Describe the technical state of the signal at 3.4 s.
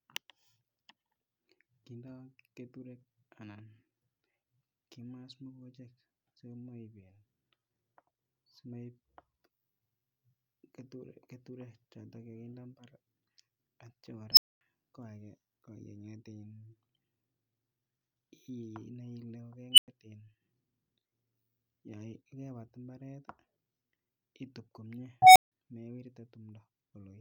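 At 3.4 s the speech signal is intact, with no audible dropout, distortion, glitch or other technical fault at that moment.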